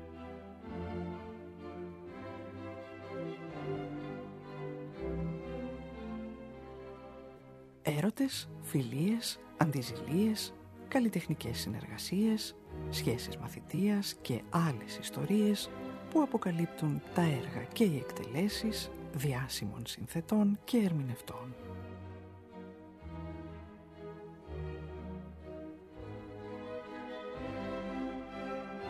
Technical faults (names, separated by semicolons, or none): corrupt frame concealed